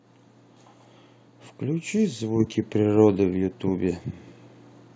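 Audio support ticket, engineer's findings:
Microphone volume stepped up at 2.4 s. Call software's input gain control judged the mic too quiet and raised device input volume in a single step. Result: sudden level jump of about 4 dB, voice and background noise rising together. Call path audible as band-limited, nothing above 8 kHz, consistent with G.722.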